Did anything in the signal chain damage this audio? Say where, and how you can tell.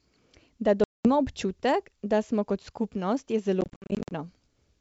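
Yes, at the network stage: packet loss on an ADPCM call over G.722. There's a hard silent hole from 0.84 to 1.07 s, then scattered dropouts from 3.61 to 4.12 s, each run up to 60 ms. After each hole the decoder's predictor has drifted, so sound resumes slightly distorted.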